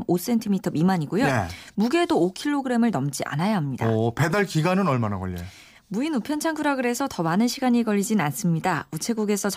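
No technical faults can be heard anywhere in this recording.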